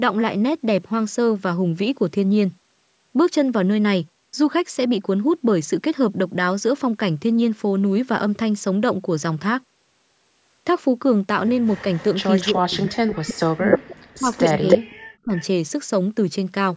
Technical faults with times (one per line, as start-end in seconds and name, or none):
11.67-12.54 echo leak
12.52-15.35 speech suppressed in double talk
13.72-13.96 echo leak
14.32-14.78 echo leak
15.36-15.44 echo leak